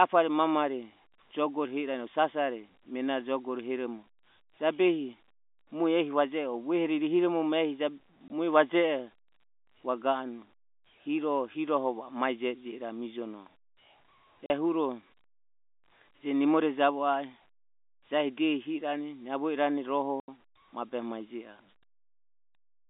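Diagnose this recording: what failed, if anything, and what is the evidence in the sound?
The fault is in the network stage: packet loss filled with silence. The speech drops out three times, at 8.28 to 8.30 s, 14.46 to 14.50 s, and 20.20 to 20.28 s, just before "mabehe mae". The gaps last 20, 40 and 80 ms, which fits one, two and four lost 20 ms packets. The receiver inserted digital silence instead of concealing the loss. The narrow telephone band, 250 Hz to 3.5 kHz, carries on unchanged around each hole.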